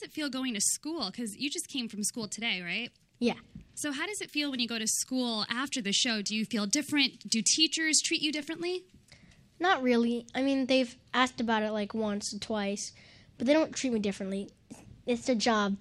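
The audio carries clock slip clicks from 0.23 s to 15.72 s: small ticks at a steady spacing of about 0.15 s, around a hundred in all, each one sample dropped or repeated. The likely cause is two devices running on unsynchronised clocks that differ by about 150 ppm. On a spectrogram they show as thin, evenly spaced vertical lines across the upper band. In the waveform, each appears as a one-sample step or kink where the wave jumps.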